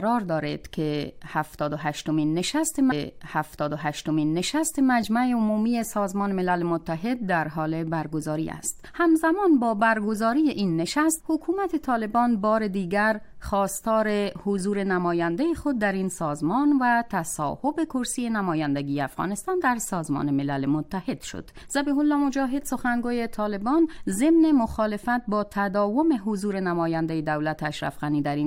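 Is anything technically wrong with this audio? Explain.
Yes. From 2.90 to 4.90 s there is a stream segment repeated: the player queued the same chunk twice, so about 2.0 s of audio plays again after a brief blip at the jump back. A spectrogram shows an identical block duplicated, with a thin vertical discontinuity at the seam.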